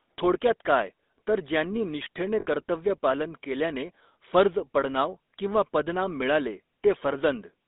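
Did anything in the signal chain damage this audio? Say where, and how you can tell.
Yes, the codec stage damaged the whole clip. The entire speech track carries a GSM full-rate codec sound: a buzzy, gravelly roughness that's plainly audible from start to finish. The band runs from about 250 Hz to 3.7 kHz, so there's no low end and nothing bright on top. That texture comes from the codec modelling the vocal tract and exciting it with a sparse, regular pulse train, which fits a 13 kbps full-rate stream.

Further down the line, in the network or radio path, there's a dropout from 2.40 to 2.46 s, right after "काय तर ज्यांनी निष्ठेने" and just before "कर्तव्य पालन केल्याने फर्ज". That's lost GSM frames. For those 60 ms the decoder had no good data, so it reused the last valid frame's parameters. You hear that as a short, rough metallic ring in place of real sound. The length fits about three dropped frames.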